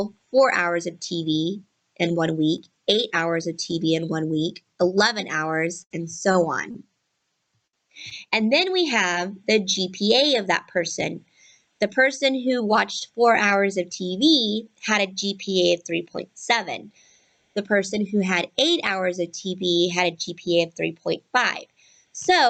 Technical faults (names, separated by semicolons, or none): repeated packet loss (robotic sound); jitter buffer speed-up